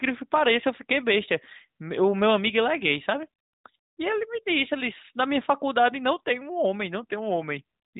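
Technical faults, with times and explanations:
No technical faults are audible in this speech recording.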